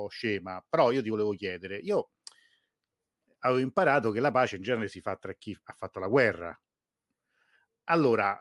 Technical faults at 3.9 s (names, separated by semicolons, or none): none